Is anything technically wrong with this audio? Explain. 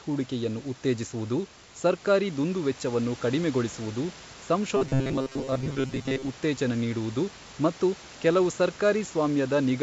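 Yes. From 4.77 to 6.29 s the speech turns into robotic sound from repeated short buffers: a rigid, metallic buzz at 133 Hz that only loosely tracks the speech. The likely cause is audio arriving too seldom, so the player loops roughly 7.5 ms snippets, and most of the real audio in that span is skipped. A spectrogram shows flat, evenly spaced harmonic lines at multiples of 133 Hz, and the waveform shows near-identical repeating cycles. The G.722 call path leaves nothing above 8 kHz, and room noise sits about 23 dB below the speech.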